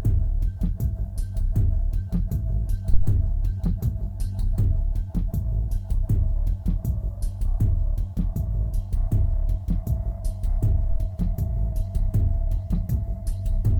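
A supply step on the live input, passed through the coupling capacitors, causes a phantom power thump at 2.94 to 3.19 s, a deep thud peaking near -4 dBFS and dying within 57 ms. A smaller one follows at 10.91 to 11.00 s, near -13 dBFS, decaying in 20 ms.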